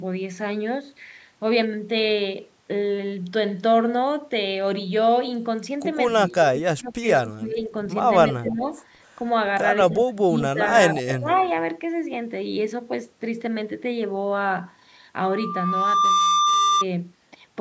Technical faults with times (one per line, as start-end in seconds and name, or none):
6.29-7.73 speech suppressed in double talk
8.32-8.52 echo leak
8.39-8.64 speech suppressed in double talk
9.89-10.74 speech suppressed in double talk
10.65-10.79 echo leak
11.04-11.28 speech suppressed in double talk
11.30-11.52 echo leak